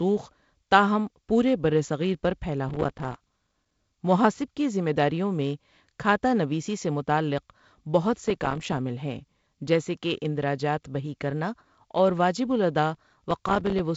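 Processor overload crackle shows up three times, at 2.69 to 3.78 s, 8.24 to 8.78 s and 12.95 to 13.80 s. The processor keeps missing its tiny buffer deadlines, which fits buffers of a few milliseconds, and each miss drops to silence. Dozens of these hard-edged gaps in a row make a gritty tearing over the speech, all under the G.722 wideband band limit around 7.7 kHz.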